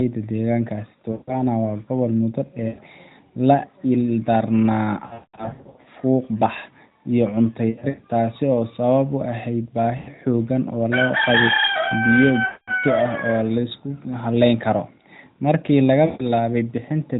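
Lost AMR speech frames hit at 1.12, 2.68, 5.06 to 5.88, 7.70, 9.98, 12.46 and 16.06 s, the first right before "waa gobol muddo" and the next just after it. Each time the decoder stretches the last sound, fades it, then resumes roughly.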